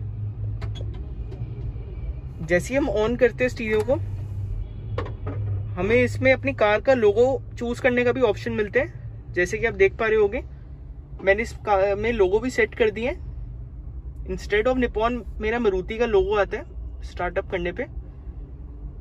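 Nothing technically wrong turns up anywhere in this audio, so there's no fault to point to and no cause to chase.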